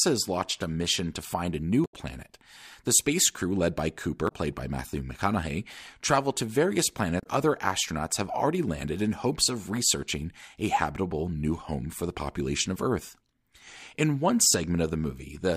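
Speech with damaged data in a compressed stream at 1.82–1.94 s, 4.25–4.32 s and 7.17–7.27 s: corrupted frames make the decoder lose sync and search for the next frame header, giving short glitches. Unlike packet-loss gaps or concealment, this comes from the decoder misreading the damaged frames and skipping ahead.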